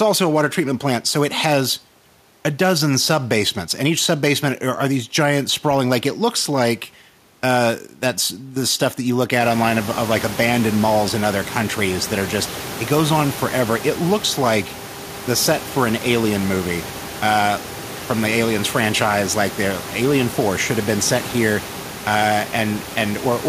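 No technical faults are audible.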